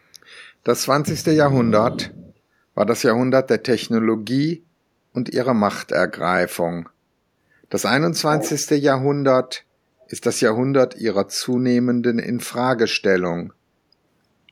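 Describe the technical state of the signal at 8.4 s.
Echo leak, from 8.33 to 8.5 s: a short delayed copy of the speech arrives 386 ms behind the original, roughly 10 dB quieter. The likely cause is a loudspeaker on one side whose echo canceller let some microphone pickup travel back.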